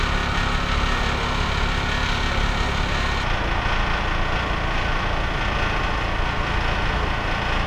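From 3.23 s to the end, the sound plays at the wrong speed, at 0.812 times its original rate, so it runs slower and drops about four semitones in pitch at once. Likely cause: the section was resampled or played against a mismatched clock.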